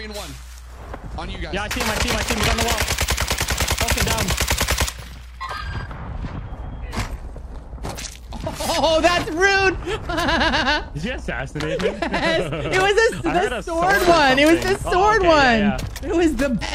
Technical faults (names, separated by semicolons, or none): mains hum; damaged data in a compressed stream